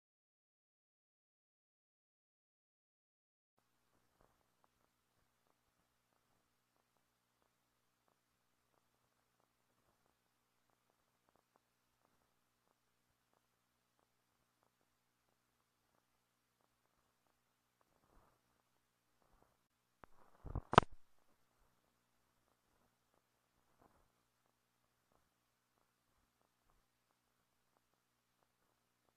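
At 10.35, 18.30 and 22.28 s the audio skips forward with no gap, each time losing about 20 ms. This is likely audio missing between chunks at 4 s boundaries. Each skip is a brief jump, and the waveform shows an abrupt discontinuity with a thin vertical broadband line on a spectrogram.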